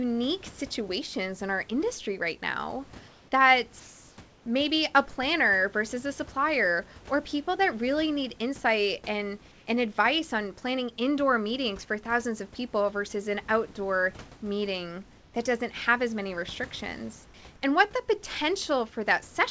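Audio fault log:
3.08–3.32, 3.80–4.18, 9.52–9.66, 15.18–15.34 and 17.26–17.34 s, comfort noise in place of the background: in these short pauses, right after "our industry right now" and "have as many restrictions", the room tone turns flat and featureless, up to about 2 dB quieter. That's likely discontinuous transmission filling silence with synthetic noise.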